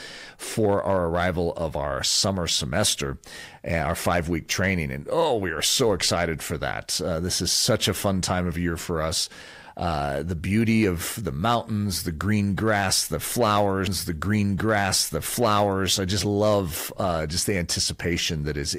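Hard clipping runs through the whole clip. The speech is overdriven by about 6 dB, so a small fraction of peaks are cut flat and crackle.

At 13.87 s a stream segment is repeated. About 2.02 s replays until 15.89 s, with a blip at the jump, just before "I just love uh".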